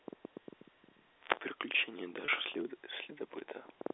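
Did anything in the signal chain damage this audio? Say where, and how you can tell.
Yes. From 2.25 to 2.28 s the speech holds a brief, slightly buzzy pitch. This is network packet loss with pitch repetition covering a 30 ms gap.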